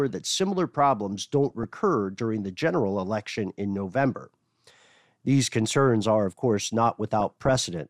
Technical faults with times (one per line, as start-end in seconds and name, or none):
1.51-1.75 DAB burbling
7.20-7.56 DAB burbling